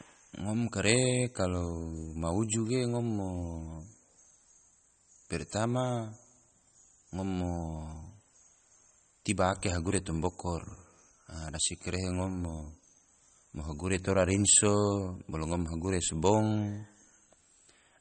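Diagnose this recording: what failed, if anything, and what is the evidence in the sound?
The failure sits at the codec stage, and is likely MP3 compression. Throughout, nothing is heard above 8.4 kHz. The speech sounds watery and swirly, with damage plainly audible. Weak frequency lines drop in and out between frames, which fits a starved bitrate near 32 kbps.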